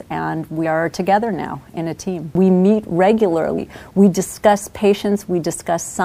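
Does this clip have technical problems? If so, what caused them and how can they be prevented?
Yes. At 0.64 s and 3.57 s the sound jumps ahead with a brief smeared blip. These are compressed frames skipped: roughly four 26.1 ms frames, about a tenth of a second, went missing or were rejected as damaged. Prevent it by verifying file integrity after transfer and re-encoding from an intact source.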